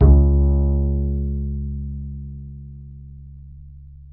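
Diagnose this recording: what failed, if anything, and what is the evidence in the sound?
Nothing failed; no fault is audible in this recording.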